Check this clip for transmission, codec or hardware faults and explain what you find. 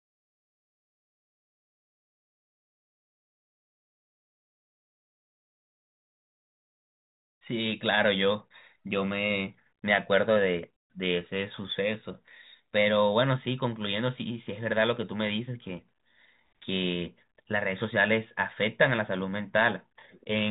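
No transmission, codec or hardware faults turn up in this speech. It comes through a G.726 ADPCM path at 40 kbit/s, which leaves at most a faint trace of its own and cuts off everything above 3.8 kHz, giving the usual narrow telephone band.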